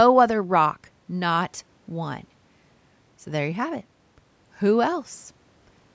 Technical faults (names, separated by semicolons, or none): none